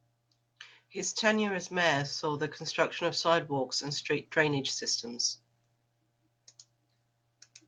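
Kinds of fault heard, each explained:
Nothing stood out on listening to the speech here; no fault of any kind could be heard.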